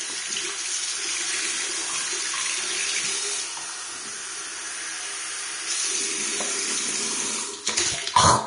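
Throughout, grainy hiss and blurred attacks point to likely heavy Vorbis compression near 33 kbps; a spectrogram shows speckled treble and nothing above 10.6 kHz.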